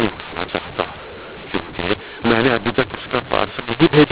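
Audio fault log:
throughout, mu-law and A-law mixed up: the speech was coded with mu-law but decoded as if it were A-law. The two logarithmic curves assign different levels to the same 8-bit codes, so each sample is scaled wrongly. Some come out too loud and some too quiet, and the faintest values jump well above silence. The result is harsh, gritty distortion over the speech, with noise filling the pauses, on top of the 4 kHz telephone band limit that fits 8 kHz G.711 sampling.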